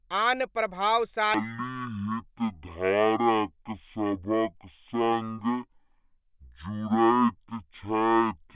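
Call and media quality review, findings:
Wrong sample rate from 1.34 s to the end (8.56 s): playback clock at half the capture rate, fits 16 kHz audio played as 8 kHz. Speech runs at half speed, pitched a full octave low.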